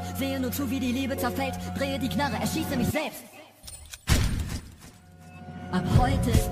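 Compressed frames skipped at 4.59 s: a short run of encoded frames never reached the output, either missing from the file or rejected by the decoder as damaged. The audio jumps forward by about 70 ms, which points to roughly three frames of 26.1 ms each. At the splice, the material just before and after is butted together.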